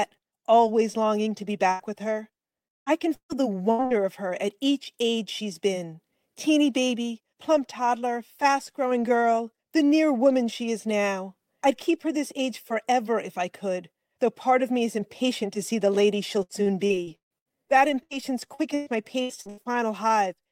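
At 1.71 s a burst of packet loss leaves about 80 ms of audio undelivered. The receiver covers the hole by extending the last sound it had and fading it down, so a brief held tone or thinning hiss replaces the lost material. At 1.82 s the audio picks up again a little further along, and the missing slice is simply gone.

From 2.67 to 3.94 s repeated packet loss sets in. Five separate holes, the longest about 190 ms, are each patched by stretching the preceding sound. Roughly a third of this stretch is concealment rather than real audio, and the rapid alternation of genuine and synthesized fragments gives a choppy quality with pieces dropping out.

The same repeated packet loss returns from 16.43 to 17.57 s, this time with seven gaps, the longest about 155 ms. Around 38 percent of the span is filled in, and the sound again turns stuttering.

At 18.03 s another single burst of packet loss removes about 80 ms. 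It is bridged by a short fading continuation before the audio resumes at 18.13 s.

A final spell of repeated packet loss runs from 18.54 to 19.72 s. Six gaps, none longer than about 117 ms, leave roughly a third of the span concealed. The longest hole is shorter here, but the same broken-up texture returns.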